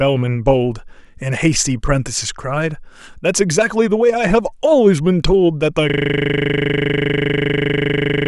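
A system hang loop hits this speech clip at 5.90 s: the playback system froze while the hardware kept replaying one 40 ms buffer, so the audio becomes a steady 25 Hz buzz until the end.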